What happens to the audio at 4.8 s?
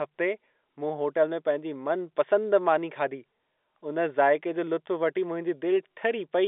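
Nothing goes wrong at 4.8 s: the speech carries straight through that moment with the same narrow telephone-line sound as the G.711 A-law coding gives it throughout, with no dropout, click or change in level.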